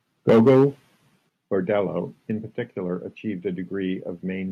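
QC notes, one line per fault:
0.29 to 0.65 s, microphone overload. The loudest peaks hit a hard ceiling, about 7 dB over. Roughly a sixth of the samples there are flattened. The cut-off tops add a harsh, crackling edge. The likely cause is microphone input set too high.
0.3 s and 1.29 s, microphone volume stepped down. Sound and background drop suddenly in level, about 2 dB then about 6 dB. The first drop lands inside the distorted stretch. Each sounds like an input gain cut in one step, not a fade.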